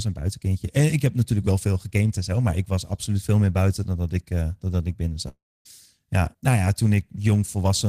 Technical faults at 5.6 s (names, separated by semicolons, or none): long network dropout